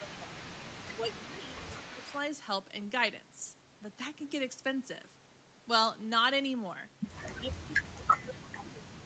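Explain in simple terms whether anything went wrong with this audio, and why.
Two things went wrong. Both are typical of a call where both people talk at once.

Speech suppressed in double talk: the voice dips or drops out at 0.0 to 0.32 s, 0.93 to 1.73 s and 1.9 to 2.1 s. From 7.32 s to the end it is pushed down hard. The likely cause is that the echo canceller confused this voice with loudspeaker sound and turned both down.

Echo leak: from 0.07 to 2.18 s, and again briefly at 7.25 to 7.29 s, a faint copy of the voice trails about a fifth of a second behind. It most likely comes from a loudspeaker on the other end whose echo canceller let some sound slip back.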